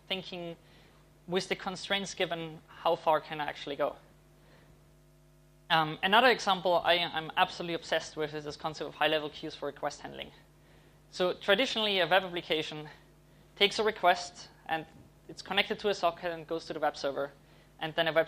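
No technical fault can be heard anywhere in the recording. The sound holds steady throughout, with nothing that calls for a time or a cause.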